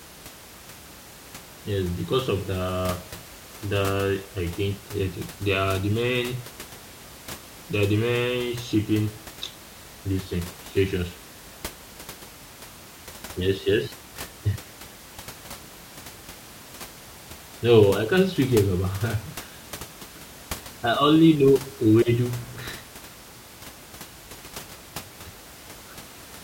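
There are no technical faults to describe in this speech recording.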